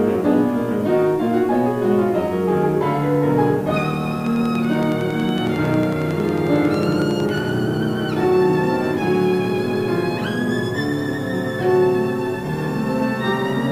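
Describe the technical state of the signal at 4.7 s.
At 4.7 s a steady ticking sits on top of the sound: evenly spaced, near-identical clicks at about 10.9 per second, a little louder than the audio itself and audible in quiet gaps too. This train of clicks runs from 4.27 s to 7.39 s, around forty pulses in all. The regular, repeating pulse shape is likely caused by interference from nearby equipment or a faulty connection or power supply injecting a short spike at a fixed rate.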